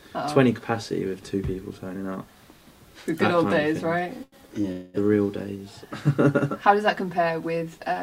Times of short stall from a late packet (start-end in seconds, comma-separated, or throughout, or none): 4.23-4.67